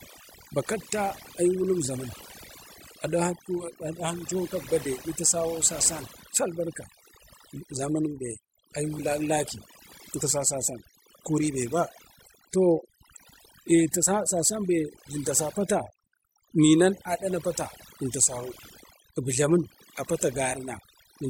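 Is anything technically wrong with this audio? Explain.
Yes. Throughout the speech there is overdone noise removal: an overly aggressive reduction stage cuts any frequency band near its noise estimate, taking quiet speech detail with it. Gaps sound near-silent with twinkling specks; a spectrogram shows scattered isolated blobs over blank background.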